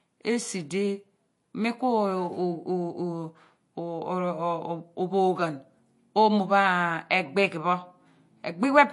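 MP3 compression, throughout: the speech stops above 11.3 kHz and sounds plainly watery, likely from an encoder near 48 kbps discarding treble and weak frequency lines.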